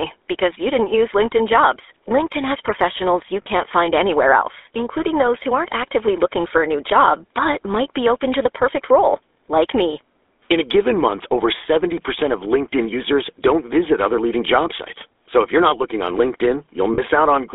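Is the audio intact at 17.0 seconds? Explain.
No. From 16.94 to 17.0 s, lost GSM frames leave the sound held in a short, rough metallic ring. The decoder had no valid data for about 40 ms, which fits two 20 ms frames, so it repeated the settings of the last good frame. A plain dropout would go silent, and a glitch in the waveform itself would click. Here the held sound rings instead.

The GSM full-rate codec also runs underneath the whole clip and is plainly audible at that point. The speech has the typical buzzy, gravelly roughness of this codec, which models the vocal tract and drives it with sparse, regularly spaced pulses. The sound, which fits a 13 kbps full-rate coder, is limited to roughly 300 Hz to 3.6 kHz. Ordinary low-pass telephone filtering would sound muffled but clean. This codec's damage sounds rasping.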